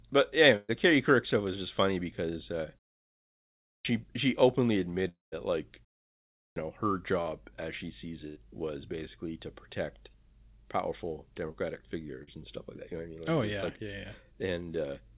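At 0.56 s a burst of packet loss removes about 120 ms of speech. The receiver stretches the last sound over the hole and fades it, so a held buzz or fading hiss covers the gap. On a spectrogram, the last frame goes flat and dim until 0.71 s, then jumps back further along.

At 3.71 s, after a one-second pause, a clipped start after a pause drops about 143 ms, so "she openly" begins abruptly. The output device was still waking. The waveform shows speech appearing at full level with no onset ramp.

From 5.09 to 5.34 s a long network dropout, likely from a stall in arrival, leaves a fading buzz or hiss and then about 160 ms of silence. Roughly 240 ms of speech is gone. The spectrogram shows smeared, decaying bands and then a blank column.

At 6.41 s, after a 0.64 s pause, there is another clipped start, with about 154 ms swallowed before speech enters sharply.

Short concealed packet loss appears at 7.22 s between "know her" and "as she sees", at 11.52 s, and at 12.23 s just before "and stuff like that". 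Each is a 20 to 40 ms gap patched from the preceding sound, heard as a brief smear or wobble. Each shows as a thin, blurred vertical seam.

At 8.28 s a second burst of packet loss replaces about 80 ms with a fading continuation of the last sound, visible as a frozen, weakening spectrum up to 8.38 s.

Throughout, the G.711 mu-law call path leaves a spectrogram with nothing above 4 kHz.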